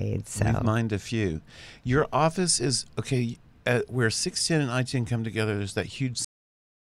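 At about 6.25 s the speech just stops dead, a classic cut-off end. The final stretch of audio never got written out, so a sound is chopped mid-way and falls straight to digital silence, with no natural decay, for the last half second or so.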